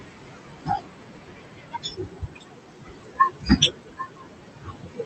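Noise suppressor artifacts run through the whole clip: the suppressor lowers the room noise, about 15 dB below the speech, frame by frame, so the noise sinks between the words and rises under them. From 0 to 5.05 s, speech is cut by the noise suppressor, which mistakes parts of the speech for noise. Soft consonants and word endings sound swallowed, dropping by as much as about 22 dB. The call path's top end stops near 8 kHz, which fits Opus at a moderate bitrate.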